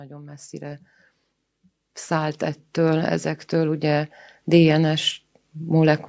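The level swells from 0.05 to 0.9 s, about 4 dB, and again from 2.08 to 4.77 s, about 8 dB, with voice and background rising together. This is automatic gain rising: the gain control judged the input too quiet and turned it up gradually.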